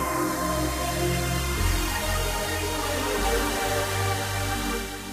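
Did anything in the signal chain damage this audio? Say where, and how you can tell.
No, nothing along the chain seems to have damaged these sounds, as there's nothing in what you hear that points to any stage from capture to playback.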